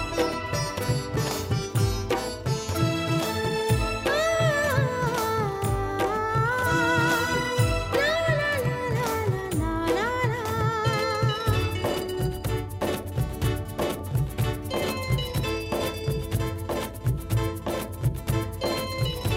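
No technical faults can be heard anywhere in the recording. Nothing in the sound suggests a dropout, glitch or other playback or transmission problem.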